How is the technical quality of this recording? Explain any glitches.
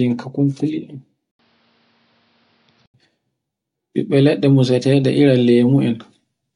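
The recording has one clear glitch. From 1.31 to 2.94 s, the input likely switched to a poorer device that cuts everything above 5.8 kHz. After an 80 ms gap, the speech turns dull and a little quieter, with faint new hiss.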